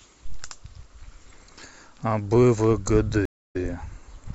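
A speech recording with a stream reconnect between 3.25 and 3.56 s. The sound cuts to about 0.28 s of silence while the player rebuilds its connection and starts a new decoder. When sound returns it picks up 26 ms earlier than where it stopped, so a sliver is heard twice. That small repeat, with the first frame easing back in, separates it from a simple dropout, which would resume exactly where the gap began.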